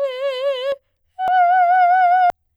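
Compressed frames skipped at 0.72, 1.28 and 2.30 s: whole frames of roughly 93 ms each never reach the output, so the music jumps ahead, by about 0.7 s at the first and last points and about 0.3 s at the second.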